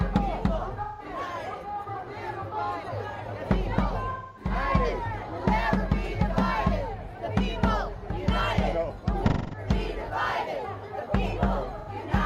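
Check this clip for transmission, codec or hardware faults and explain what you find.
There's AAC frame loss with concealment at 0.82 to 1.06 s, 4.11 to 4.51 s, 9.28 to 9.68 s and 11.78 to 11.89 s. Each time the decoder papers over missing frames by reusing the last good spectrum, so you get brief smeared, noisy, phasey patches.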